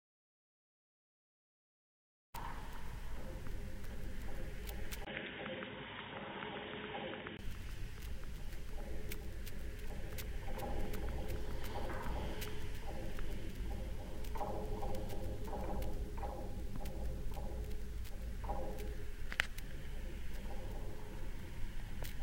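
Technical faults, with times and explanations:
0.00–2.34 s, audio dropout to silence: The clip opens in digital silence that is already under way. There is no room tone at all. The sound then arrives abruptly at 2.34 s, mid-flow rather than with a natural onset. Whatever happened before that point is missing. The likely cause is a lost input, such as a disconnected device or a stray mute, while the recorder kept writing empty samples.
5.05–7.39 s, input switched to a poorer device: A gap of about 20 ms opens at 5.05 s. After it, the sound turns dull and boxy. Nothing comes through above 3.8 kHz, so the top end is gone. The level drops slightly, and a faint new noise floor sits well below the sound. This likely means the recording moved to a narrower-band microphone or headset profile. At 7.39 s the full bandwidth returns.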